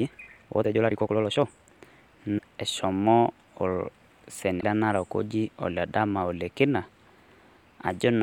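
From the start to 1.84 s the speech runs fast, about 1.63 times normal pace, yet its pitch is unchanged and it sounds rushed. This is likely a time-stretched section, where short pieces were dropped to shorten the audio without shifting pitch. Brief glitches follow at 2.37 to 2.41 s and 4.57 to 4.64 s. This is damaged data in a compressed stream: the decoder misread corrupted frames, lost sync and jumped to the next frame header.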